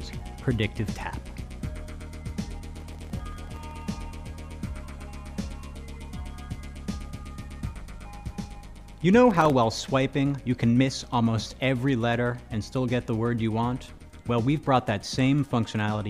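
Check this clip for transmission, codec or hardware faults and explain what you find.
Processor overload crackle appears twice, from 2.75 to 3.82 s and again from 9.30 to 9.50 s. Overloaded processing misses many sub-millisecond buffer deadlines in a row, leaving tiny silent gaps that are heard as gritty crackle.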